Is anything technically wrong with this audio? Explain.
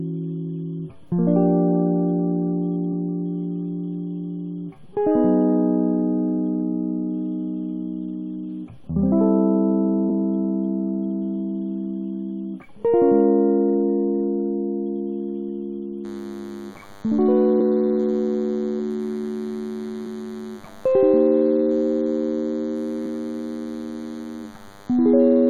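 Yes, two kinds of fault affect this music.

Damaged data in a compressed stream appears as three short blips at 10.09 s, from 17.59 to 17.61 s, and at 20.05 s. At each point the decoder met corrupted frames, misread or discarded them, and lost sync until it found the next valid frame header. The result is a brief chirp, squawk, click or short hole in the music.

DECT cordless phone buzz starts at 16.05 s and continues to the end, sitting roughly 25 dB below the music. A nearby DECT handset or base sends a radio burst every 10 ms, and the audio circuitry rectifies those bursts into a 100 Hz repetition. It sounds like a thin, steady, rasping buzz rich in harmonics. Mains hum, by contrast, sits at 50 or 60 Hz and is smoother and more tonal.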